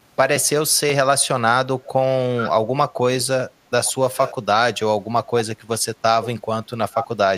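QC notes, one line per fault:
2.41–2.50 s, 3.85–3.93 s, 4.16–4.34 s, 6.93–7.07 s, echo leak: the far end's echo canceller is likely failing to cancel its loudspeaker pickup, so the call audio returns about 837 ms late. Each burst is a short delayed copy of the speech, about 10 dB below it at 2.41 and 4.16 s, about 20 dB below at 3.85 s, and strongest at 6.93 s, only about 5 dB down.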